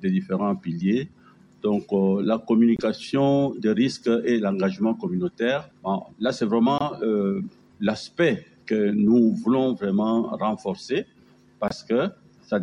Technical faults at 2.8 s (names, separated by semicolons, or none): corrupt frame muted